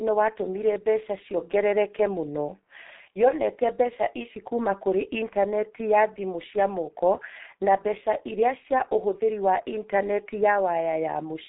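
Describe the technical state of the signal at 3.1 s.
At 3.1 s the speech carries the G.723.1 codec damage that runs through the whole clip. Nothing above about 3.9 kHz survives, so the sound is muffled. The codec models the vocal tract in coarse 30 ms frames and refreshes that model slowly, so fast consonant transitions smear and voicing turns hoarse. The heavy degradation comes with coding at 6.3 kbit/s.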